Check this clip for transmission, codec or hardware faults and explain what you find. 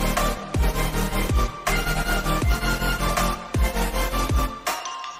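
There's one hardware fault, present from start to finish: computer activity noise. Load changes in the computer, like the processor or graphics card working harder, are shifting the ground that the audio circuit shares. That puts a faint buzzy chirp, pulsing at around 1 kHz, under everything at roughly 35 dB below the sound. It follows the machine's activity, not the audio.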